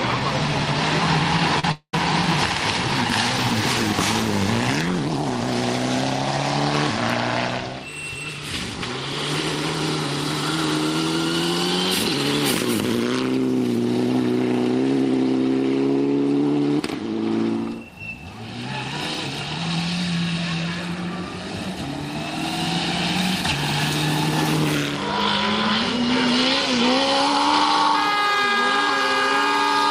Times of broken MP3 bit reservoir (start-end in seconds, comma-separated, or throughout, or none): none